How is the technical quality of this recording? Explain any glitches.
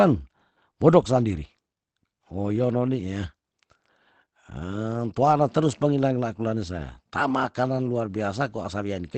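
The technical quality is limited by audible compression damage throughout the clip. The fault is Opus compression, most likely in its SILK speech mode. At a low rate, this mode models the voice sparsely and discards the upper band. Nothing is present above about 8.6 kHz, which fits a wideband setting near 16 kbps. The result sounds muffled and hoarse. Sibilants lack air. The damage is plainly audible from start to finish.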